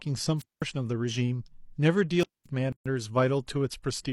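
The wireless microphone's radio signal fades twice, and each time the receiver's squelch cuts the output. These are wireless microphone squelch dropouts. The first runs from 0.38 to 0.63 s, the second from 2.19 to 2.47 s. Each is heard as a short swell of hiss or static, then a hole of near silence, about 203 ms the first time and about 224 ms the second, before the speech comes back.

Shortly after, at 2.72 s, the audio has a gap at a join of encoded pieces. The speech was encoded in separate sections and spliced without trimming. Each section's leading encoder delay and padded final frame were kept. This opens a silence of about 133 ms, ending at 2.86 s, with edges smeared by the codec, and the speech resumes exactly where it stopped.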